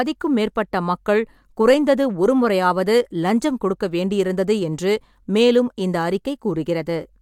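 Nothing goes wrong anywhere in this speech recording; there's no technical fault to point to at any moment.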